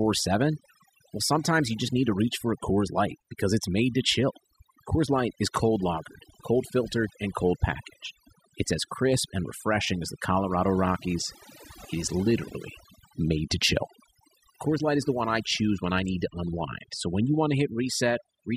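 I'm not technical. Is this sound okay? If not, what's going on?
No. The whole recording has overdone noise removal. Someone ran a noise-cleaning tool on a noisy recording and set it far too strong. The tool shuts off any slice of sound it mistakes for background noise. Quiet parts of the voice get shut off too. So the gaps between phrases drop away and break up into twinkling, warbling specks.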